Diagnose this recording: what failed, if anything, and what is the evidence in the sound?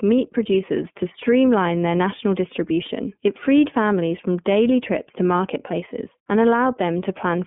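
Codec stage: iLBC coding throughout. Nothing passes above 3.6 kHz. Speech sounds rough and synthetic, which fits 30 ms frames coded independently at 13.33 kbps.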